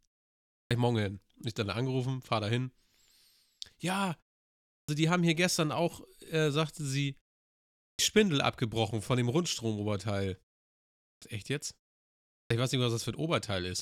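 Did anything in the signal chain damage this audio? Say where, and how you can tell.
Yes. Clipped start after a pause at 0.61, 4.79, 7.9, 11.12 and 12.41 s, at the playback stage: after each 0.6 to 0.8 s silence the output device sleeps, and while it wakes it swallows roughly the first 90 to 97 ms, so speech begins abruptly without its opening sounds.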